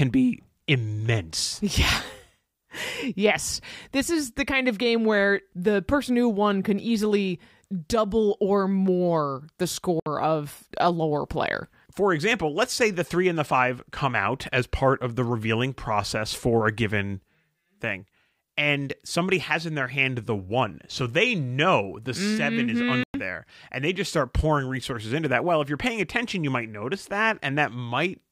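At 10.00 s the speech cuts to silence for about 64 ms, resuming at 10.06 s, and again at 23.04 s for about 107 ms, to 23.14 s. Each gap is a likely Bluetooth dropout, with late packets discarded before reaching the headphones, a few packets' worth each time. Speech resumes further along, as though it had continued unheard. On a waveform these are flat-line holes; a spectrogram shows full-height blank vertical bands.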